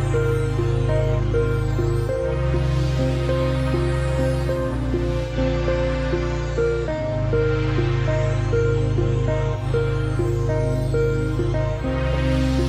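Here's a hybrid radio recording where digital radio blending to analogue happens at 5.20 s: a 200 ms cross-fade to FM brings in faint hiss roughly 40 dB down with no level jump, then it blends back to digital at 9.69 s.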